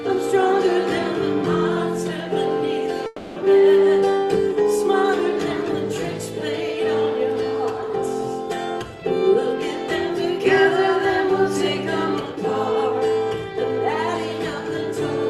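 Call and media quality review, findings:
Long network dropout, 3.06 to 3.38 s: the sound smears into a fading buzz for about 0.3 s with no hard silence, then resumes with that stretch gone. Likely receive-side packet loss, with concealment extending the last frame. Longer and smoother than a single lost-packet click.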